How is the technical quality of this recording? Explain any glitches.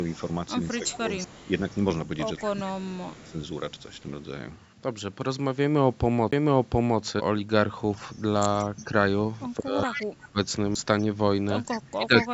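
The recording has three kinds of fault: echo leak, speech suppressed in double talk, and CD skips. Its top end stops at 8 kHz, consistent with the call's microphone processing.

Echo leak, from 0.06 to 4.01 s, 8.17 to 8.84 s, 9.93 to 10.07 s and 11.69 to 12.25 s: the far end's echo canceller likely failed to remove its loudspeaker pickup. That sends back a copy of the speech delayed by 180 ms, ranging from about 25 dB down to about 10 dB below the direct sound.

Speech suppressed in double talk, from 0.80 to 1.50 s, 2.47 to 3.35 s, 8.66 to 10.38 s and 11.77 s to the end: while both sides spoke, the echo canceller likely couldn't separate talker from echo and pulled everything down. The speech dips by roughly 10 to 25 dB, deepest in the last stretch.

CD skip, at 1.24 s, 6.32 s and 10.75 s: the disc player's laser jumped to another turn of the spiral. The player briefly muted, for a few milliseconds up to about 10 ms, then resumed from a different point. 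Each skip sounds like a tick followed by an abrupt jump in the speech.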